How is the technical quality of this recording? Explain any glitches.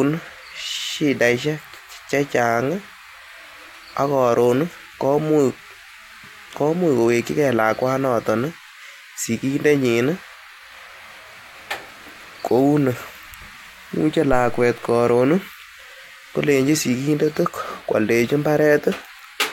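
The speech recording has one glitch. At 14.33 s comes a phantom power thump: switching a supply on or off on a live input pushes a voltage step through the coupling capacitors, producing a deep thud near −14 dBFS that decays in 107 ms, ending by 14.80 s. Unlike a plosive or handling bump, it has no breath or rustle, only a smooth electrical decay.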